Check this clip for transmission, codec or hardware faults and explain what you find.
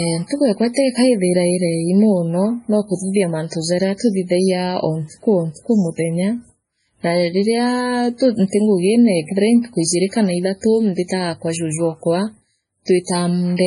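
Two faults here: heavy codec damage across the whole clip, and a short pre-echo near the end.

All the way through, the speech sounds watery and swirly, with nothing above 10.6 kHz, so the top end is just gone. That's likely MP3 compression at a very low bitrate, somewhere around 24 kbps. With so few bits, the encoder chops the treble at a fixed point and drops weak frequency lines, which flicker in and out between frames. That flicker is the swirl, and the sibilants come out chirpy and metallic.

Then there's a pre-echo from 11.08 to 11.10 s, right after "ijiri kana ithatu" and just before "kwa juju". The codec spreads its quantisation noise evenly across a whole block. Here a sharp attack lands late in the block, so the noise meant for the loud part also fills the quiet gap before it, about 22 ms of it. You hear a brief hiss leading into the attack, and the onset itself comes out soft and smeared.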